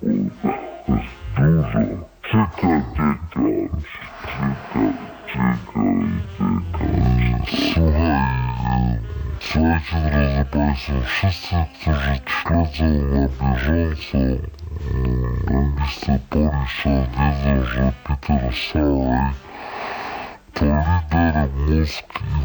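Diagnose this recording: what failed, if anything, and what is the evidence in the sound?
The failure is at the sample-format stage: stereo read as mono. Throughout, the audio runs at 0.5 times speed and 12 semitones low. Interleaved left and right samples are played in sequence as one channel. A spectrogram shows everything compressed downward, with a fainter mirrored copy in the upper half.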